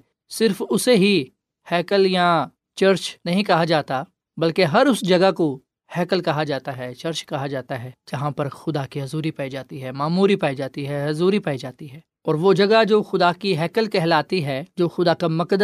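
Nothing in this recording jumps out as a technical fault at any point, so there's nothing to flag along the way.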